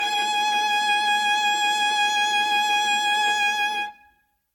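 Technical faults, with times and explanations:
throughout generation loss: likely repeated lossy re-encoding, about seven passes, stacks quantisation errors, so the music sounds swirly and hollow, attacks blur, nothing above 17.2 kHz.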